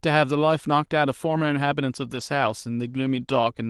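From 2.15 to 2.21 s the speech turns briefly rougher and noisier with no gap: a lost packet rebuilt from error correction, about 40 ms decoded from lower-bitrate backup copies.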